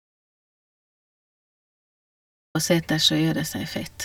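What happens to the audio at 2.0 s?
At 2.0 s the audio is in a dropout to silence, with no room tone from the start until 2.55 s, likely from lost input.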